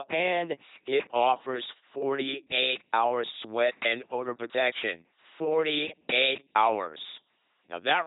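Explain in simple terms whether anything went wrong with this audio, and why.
Throughout, the speech has gone through an LPC-10 vocoder. It rebuilds speech from buzz or hiss, so it sounds robotic, with nothing above 3.9 kHz.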